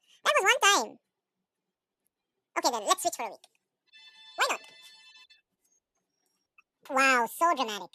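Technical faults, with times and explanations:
Throughout: audio read two samples at a time (double speed). The speech races at double speed, an octave (12 semitones) high. Pairs of samples are read as single frames, as if expecting two channels or wider samples, so high frequencies fold back.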